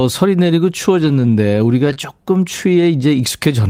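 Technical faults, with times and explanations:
0.99–1.33 s, 1.85–1.91 s and 1.97–1.99 s: lost packet rebuilt from error correction. The speech turns rougher and grainier for about 180 ms in the first stretch, then for about 40 ms and 20 ms, with no gap. Packets were lost, but the following packets carried low-bitrate copies of them, and the decoder played those instead. The first stretch fits nine 20 ms packets. Detail the copies lack is estimated.
1.93–1.97 s: short concealed packet loss. A brief smear or wobble replaces the sound, and a short consonant here could drop out. About 20 ms of audio arrived too late for the decoder, so the receiver extended the preceding sound, following its pitch if it was voiced or as shaped noise if not, then blended back into the real signal. The rebuilt packet at 1.97 s follows directly, so the two join into one rough patch.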